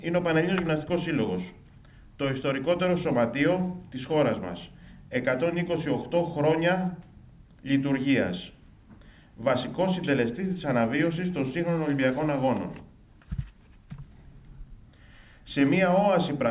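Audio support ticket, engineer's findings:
Nothing stood out on listening, with the audio band-limited to about 4 kHz by the G.711 A-law call path as expected.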